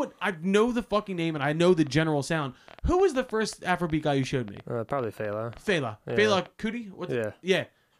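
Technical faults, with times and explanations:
1.68 to 6.47 s, train of clicks: Something, likely interference from nearby equipment or a faulty connection or power supply, injects a short pulse into the signal again and again, about 7.1 times per second at an uneven pace. The result is some forty near-identical clicks, peaking roughly as loud as the speech itself, heard as irregular ticking or popping laid over the talking and carrying on through the pauses between phrases.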